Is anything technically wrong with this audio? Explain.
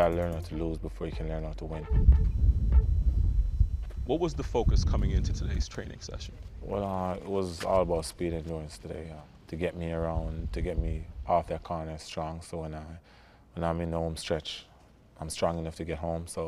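Yes. From 2.15 to 5.85 s there is computer activity noise. A change in processing or graphics load in the host computer shifts the ground that the audio circuit shares with it, and that disturbance leaks into the signal. The result is a buzzing chirp pulsing at around 500 Hz, roughly 40 dB below the sound itself. It starts and stops with the machine's workload rather than following anything in the audio.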